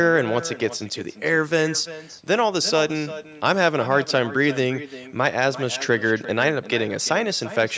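From start to finish the speech carries an echo with no canceller. The far end's loudspeaker output re-entered its microphone and returned uncancelled, so every phrase is followed about a third of a second later by a copy roughly 15 dB quieter and thinner, band-limited like the call path, with nothing above 8 kHz. Unlike room reverberation, which smears into a continuous tail, this is a distinct delayed repeat that trails each syllable.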